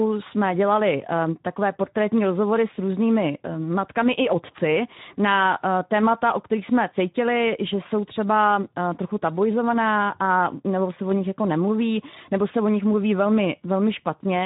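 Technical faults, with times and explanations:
Throughout: Speex codec. The speech sounds noisy and hoarse, with plainly audible coding damage. The low bitrate, which fits roughly 11 kbps, leaves few bits for the excitation signal. Nothing is heard above 3.8 kHz, so the top end sounds dull and narrow.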